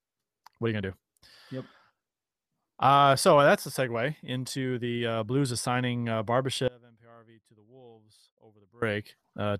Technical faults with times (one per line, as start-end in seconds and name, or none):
6.68-8.82 audio dropout to a faint residue